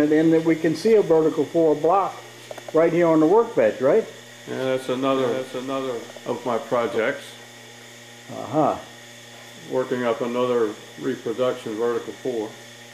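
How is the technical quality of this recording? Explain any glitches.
One glitch stands out. From 5.12 to 6.98 s, a doubled audio track appears: a full-band copy trails about 0.7 s behind at roughly 5 dB quieter, likely from a second, slower capture path. Unlike echo, it has no decay and starts and stops abruptly.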